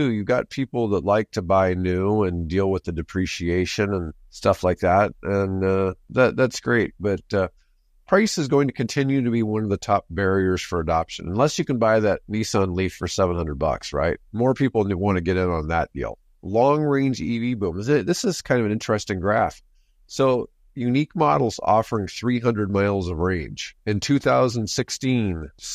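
No technical faults are audible.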